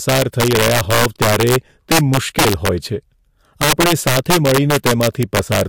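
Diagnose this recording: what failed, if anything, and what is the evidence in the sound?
Integer overflow, in the sample-format conversion or an integer gain stage. The speech is driven about 8 dB past full scale. Through the whole clip, the loudest peaks break into violent cracks. They are far harsher than ordinary clipping. Only a small share of samples, roughly two percent, cross the limit. Each one wraps to the opposite sign instead of being held at the ceiling. That full-range jump makes the sharp crack on the peaks.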